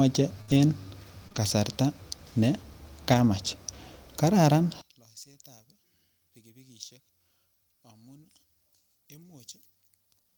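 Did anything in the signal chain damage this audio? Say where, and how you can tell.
Yes. Between 0.41 and 1.38 s, just before "kasarta ne", the network stage shows repeated packet loss, giving a choppy, robotic sound. Three separate holes appear, the longest 64 ms, with about 100 ms missing outright and about 103 ms patched by stretching the preceding sound. On a spectrogram the harmonics turn into short, frozen, smeared blocks, and the waveform shows repeated chunks where the speech should keep evolving.

At 3.14 to 3.20 s, two lost packets were rebuilt from error correction in the codec, about 40 ms in total. Opus in-band forward error correction let the decoder play the low-bitrate copies carried in the following packets, so there is no silence. Those frames sound rougher and noisier than the surrounding speech. On a spectrogram they appear as a brief patch of coarser, grainier texture with no gap in the energy.

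From 4.81 s to the end, the speech drops by about 28 dB and becomes a faint remnant. This is most likely one channel inverted at the wiring or playback stage. The voice is centred, so when the two channels are summed to mono they almost cancel, and only the small difference between them remains. The waveform collapses to a fraction of its earlier height, and the spectrogram fades abruptly.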